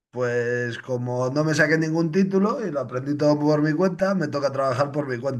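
At 4.00 s the speech has a repeated buffer. A tiny slice of about 1.33 ms, which fits a 64-sample buffer, was played four extra times because fresh audio arrived late. The five identical copies join with hard edges, so the result is a brief buzzy click rather than a stutter, repeating near 750 Hz. No audio seems lost. A waveform shows the same short shape copied back to back, and a spectrogram shows a thin vertical streak with evenly spaced harmonics.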